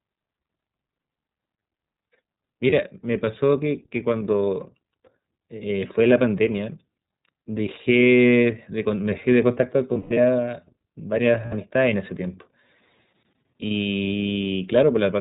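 Speech coded with the iLBC codec sounds narrowband, with nothing above 4 kHz, and rough and synthetic, which fits 30 ms frames at about 13 kbps. Unlike a fullband codec, it removes the top of the spectrum entirely. Lost iLBC frames are heard at 2.7 s, from 9.93 to 10.18 s in scattered gaps with the longest lasting around a tenth of a second, and from 11.45 to 11.54 s. Each gap sounds like a held, buzzy vowel. Unlike dropouts, these gaps are filled, and the speech recovers almost at once.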